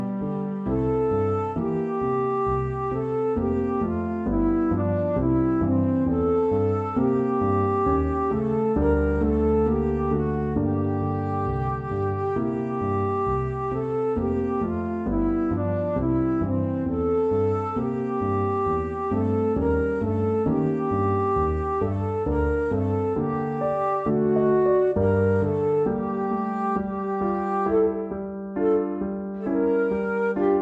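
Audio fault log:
Throughout: wrong sample rate. Sound runs at 0.667 speed, slow and about 7 semitones low, which fits 48 kHz material played unconverted at 32 kHz.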